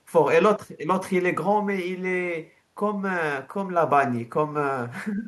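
At 5.16 to 5.27 s, the echo canceller likely could not tell the near talker from loudspeaker echo while both sides spoke at once, and turned the near side down. This is speech suppressed in double talk: the speech briefly dips by about 5 dB for roughly a tenth of a second.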